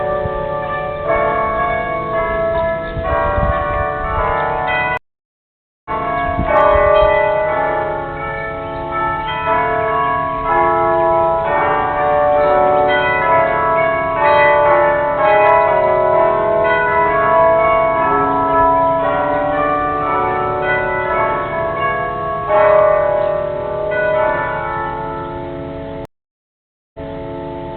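Two stream reconnect dropouts. At 4.97 to 5.90 s the audio goes silent for about 0.88 s and comes back roughly half a second further on, and at 26.05 to 27.27 s a 0.89 s gap resumes 325 ms earlier, repeating a bit as the server resends a burst.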